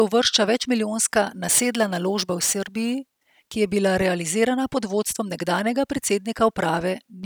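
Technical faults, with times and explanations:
1.49 to 2.99 s, crude rate conversion: just after "uvršča večmilijonska", the speech takes on a gritty, inharmonic fizz. The sample rate was changed by picking the nearest existing sample rather than filtering, which fits a 48 kHz to 44.1 kHz conversion. Samples are periodically dropped in a pattern set by that ratio, and the timing error creates tones unrelated to the speech. These tones sit only moderately below the speech and are clearest on louder, brighter sounds.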